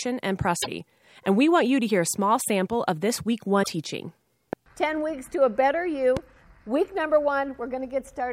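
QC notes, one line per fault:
0.59–0.67 s and 3.59–3.67 s, damaged data in a compressed stream. Each event lasts about 80 ms, and the second comes just after "sample of this week". Both briefly disrupt the speech. Part of the compressed stream was corrupted at these points. The decoder misread the bad frames and output garbled sound until it found a valid frame header and recovered sync.
4.53–4.55 s and 6.17–6.19 s, loud pop. Each is a single sharp pop lasting about 20 ms. The first peaks about 15 dB above the speech and the second about 10 dB above it. The speech carries on underneath both pops without a break. The likely cause is a sudden voltage step or spike, such as a plug, switch, static discharge or driver glitch, added to the signal. The downstream circuitry shaped it into a brief pop.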